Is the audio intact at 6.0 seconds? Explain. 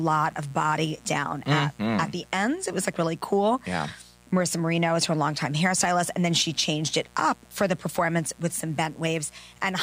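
No. At 6.0 seconds the speech carries mains buzz, and it runs through the whole clip rather than appearing at that moment. The buzz comes from sharp switching spikes on a 60 Hz supply, from a dimmer, rectifier or poor shielding, occurring twice per cycle. That gives a dense series of harmonics reaching into the kilohertz range. It sits roughly 30 dB below the speech and is heard as a steady, raspy buzz underneath it.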